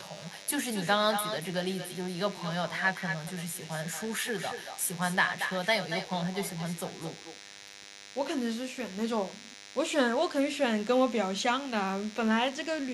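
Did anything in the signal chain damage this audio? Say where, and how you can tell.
Yes. A DECT cordless phone buzz sits under the whole clip. Analogue wiring rectifies 100 Hz radio bursts into a thin, harmonic-rich buzz, about 15 dB below the speech.

Echo with no canceller runs throughout, in call processing. Each phrase returns roughly a fifth of a second later, about 9 dB quieter and thinner. The far loudspeaker feeds back into its microphone.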